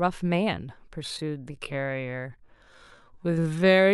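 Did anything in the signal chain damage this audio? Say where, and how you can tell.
Yes. From 1.0 s to the end of the clip, the speech is a time-stretched section, likely from software stretching it to fill a longer slot at the processing or playback stage. The pace suddenly drops to about 0.59 times normal while the pitch stays the same. To hold the pitch, the stretcher repeated short slices of the waveform, so the slowed speech drags rather than sounding deeper.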